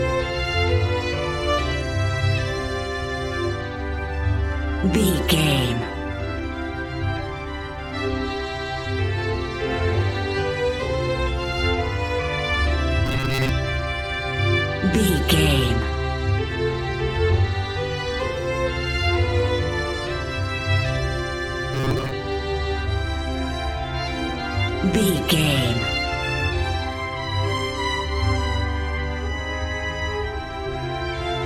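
Robotic sound from repeated short buffers at 13.06–13.49 s and 21.74–22.11 s: a fixed 133 Hz metallic buzz, likely from a roughly 7.5 ms buffer looping, rather than the silent gaps of plain dropouts.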